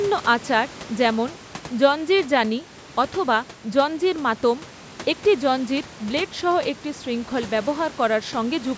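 No technical faults turn up anywhere in this speech, just the usual call microphone processing with nothing above 8 kHz and a bit of room noise sitting about 21 dB below the talking.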